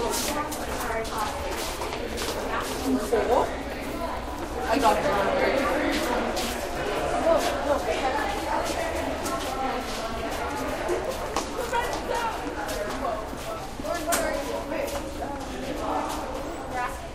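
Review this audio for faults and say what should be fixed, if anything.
Nothing here needs fixing: the sound comes through fine, with no faults to chase down.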